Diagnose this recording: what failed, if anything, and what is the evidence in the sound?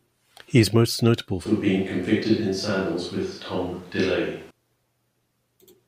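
The fault sits at the capture end, in the analogue path, and is most likely a switch to a distant microphone. Right after "is most notable", at 1.46 s, the speech abruptly turns roomy and hollow, with thinner bass and a noise floor around 30 dB below the speech, though the level barely changes. It snaps back at 4.50 s. On a spectrogram, low frequencies thin and reverberant smearing fills the gaps between syllables; the waveform shows a raised floor between bursts.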